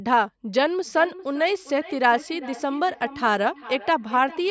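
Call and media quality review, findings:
Feedback echo between two devices, 0.85 s to end. Speech returns roughly every 400 ms, peaking about 17 dB below direct. Spectrogram: faint delayed copies of each syllable's harmonics. Probable cause: second device in the same room replays audio the first device's echo canceller cannot remove.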